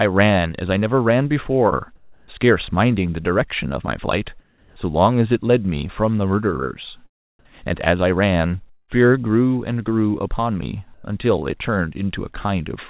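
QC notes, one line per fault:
1.96–2.28 s, 4.40–4.76 s and 10.94–11.04 s, comfort noise in place of the background: in the pauses, the quiet background (about 32 to 35 dB below the loud parts) turns into smooth, featureless hiss. It is about 3 dB quieter in the first, unchanged in level in the second and about 2 dB louder in the third. The likely cause is that the sender's voice detector stopped transmission and the receiver filled each gap with synthetic noise.
8.70–8.90 s, long network dropout: the sound smears into a fading buzz and then goes silent for roughly the last 70 ms before resuming, with 180 ms of audio missing. This is likely lost packets, concealed by the receiver extending the last sound until it gave up.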